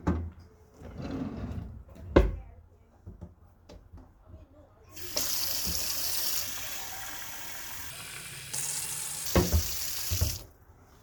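From 7.90 to 9.25 s, a section at the wrong speed plays back about 1.48 times too fast, so the sound jumps up by roughly seven semitones and hurries along before snapping back to normal. The likely cause is that this stretch was clocked at the wrong rate during editing or playback. On a spectrogram, every component in that span shifts upward and compresses in time. In the waveform, events bunch closer together over that stretch.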